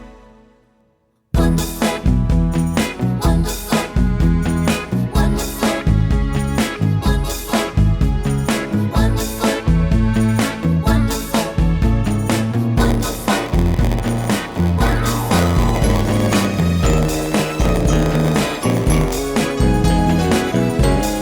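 From 12.77 s to 19.18 s the audio shows a block size mismatch (padded). A stage is writing shorter blocks than the following stage reads, and the remainder of each block is filled with silence. That puts a short gap into every block, heard as a buzz at about 86.1 Hz, which fits a 512-sample read block. The sound also runs slower, at 0.938 times normal speed, while its timbre stays about the same.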